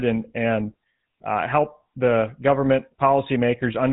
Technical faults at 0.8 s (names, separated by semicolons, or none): GSM full-rate codec